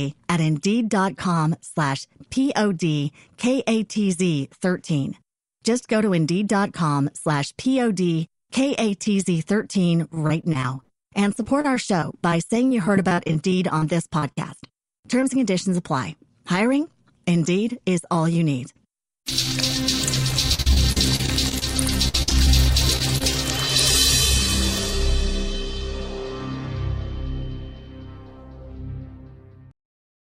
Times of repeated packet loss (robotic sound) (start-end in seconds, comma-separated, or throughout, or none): 10.14-13.83, 14.19-15.23, 20.54-21.62, 22.08-22.47, 22.97-23.24